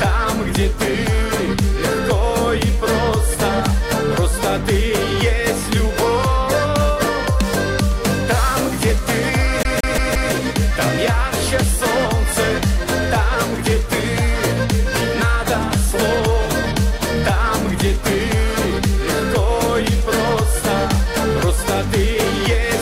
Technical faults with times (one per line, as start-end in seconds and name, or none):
9.63-10.33 CD stuck on one turn